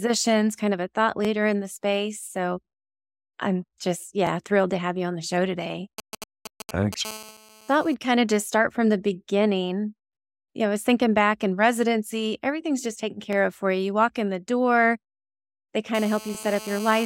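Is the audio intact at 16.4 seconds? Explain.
No. From 15.95 s to the end of the clip a hard, raspy buzz sits under the speech, steady and about 16 dB below it, with a 217 Hz fundamental and a dense stack of harmonics that have nothing to do with the speech itself. This is GSM phone buzz. A 2G phone close by, in the middle of a call, transmits in bursts about 217 times a second. The audio circuitry rectifies those radio pulses into a fixed buzz, and because the phone is on a call, the buzz never lets up.

Just before 16.4 s there is also a short stutter from 16.35 to 16.37 s, where a 20 ms slice of audio plays twice. These are overlapping chunks. The audio was handled in blocks, which fits a chunk length of about 3 seconds, and the next block started before the previous one finished. The join therefore repeats a fragment, which is heard as a brief click-like hiccup.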